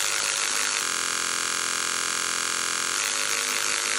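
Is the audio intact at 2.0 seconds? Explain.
No, 2.0 s falls inside a system hang loop that runs from about 0.84 to 2.95 s. The machine or its audio driver stalled while the sound hardware kept replaying the same ring buffer, so one tiny slice of audio, about 23 ms long, repeats roughly ninety times. A loop that short blurs into a steady buzz at about 43 Hz, which fits a 1024-sample buffer cycling over and over.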